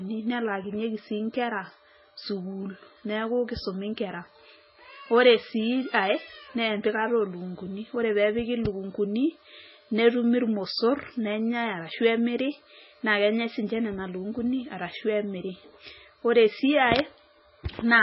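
From start to finish the speech has nothing above 5.6 kHz and a watery, swirling texture with smeared onsets, likely MP3 compression at a very low bitrate, around 16 kbps.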